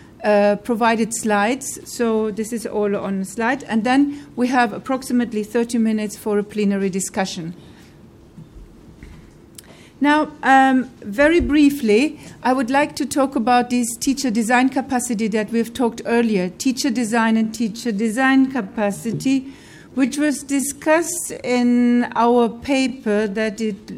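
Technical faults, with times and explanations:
17.36 to 23.97 s, time-stretched section: from 17.36 s to the end, the pace abruptly drops to about 0.7 times normal speed while the pitch stays unchanged. The slowed audio drags. This is likely software stretching the passage to fill a longer duration, holding pitch by repeating short overlapping fragments.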